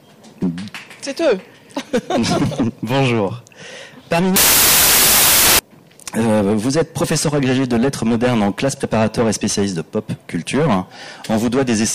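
From 4.36 s to 5.59 s, roughly 1.2 seconds, the audio collapses into loud, harsh broadband noise: samples built from the wrong bytes. The reader assembled each sample from misaligned or swapped bytes, so the rapidly fluctuating low-order bits land in the most significant position and dominate every value. On a spectrogram the stretch becomes a dense wash of energy spanning the whole frequency range, while the waveform turns into a solid, jagged block.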